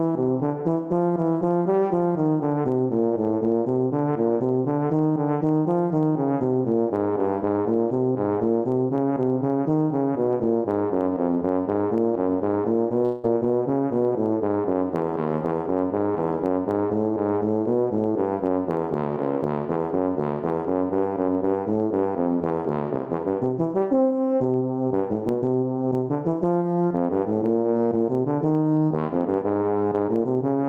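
Gain pumping runs throughout: the input gain was likely set far too high, with a fast limiter clamping down on every loud sound. The gain swings by around 5 dB, leaving the audio squashed and breathing.

At 13.05 s a long network dropout likely cut the stream for about 0.2 s, until 13.25 s. The receiver filled roughly 180 ms by stretching the last sound into a fading buzz or hiss, then the audio resumes with that stretch missing.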